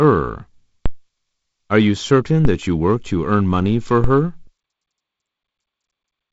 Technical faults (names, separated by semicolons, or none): DC step